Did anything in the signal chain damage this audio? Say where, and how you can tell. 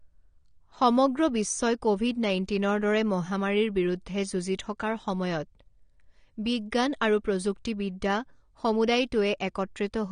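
Yes: AAC compression throughout the speech, likely at the codec stage. Nothing sounds above 9.7 kHz, and the dull, smeared top with fizzy, warbling sibilants fits AAC-LC at around 32 kbps, where quantising against a hearing model leaves spectral holes and a lowered cut-off.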